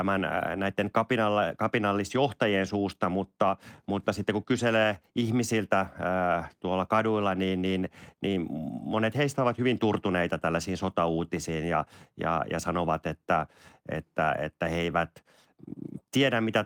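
Speech runs without any audible technical fault anywhere in the recording. Nothing in the signal breaks, jumps or drops out at any point.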